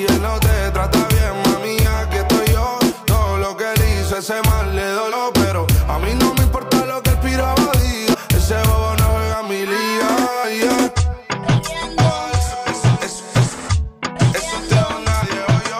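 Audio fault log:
2.93 s, 5.11 s, 8.13–8.15 s, 10.43–10.45 s, 15.21 s: damaged data in a compressed stream. At each point, part of the coded stream is wrong. The decoder misreads the affected frame, loses sync and has to find the next valid frame header, producing a chirp or blip of 14 to 22 ms. On a spectrogram each appears as a thin vertical smear of broadband energy. The waveform shows an abrupt discontinuity with a burst of garbled samples.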